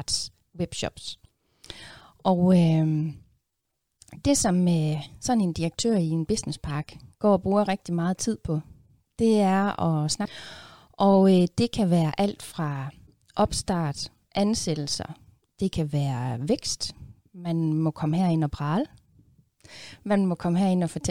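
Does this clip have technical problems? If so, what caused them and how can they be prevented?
Yes. At 10.24 s the speech jumps ahead with a small blip. This is likely a stream segment skipped after one chunk failed to load and the player moved on, which shows as an abrupt waveform break and a thin vertical spectrogram line. Retrying failed segment downloads and keeping a deeper playback buffer would prevent it.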